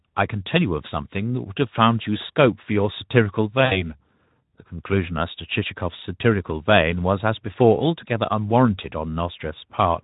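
At 3.65 s the speech breaks into VoIP packet loss concealed by the speech codec. About 60 ms of audio, which fits three lost 20 ms frames, is replaced by a stretched, smeared extension of the preceding sound that fades in level. Unlike a plain dropout, there is no silent gap. The damage also trails on until 3.87 s, because the Speex decoder rebuilds each frame from the last one, and the light Speex colouring at 15 kbps carries on around it.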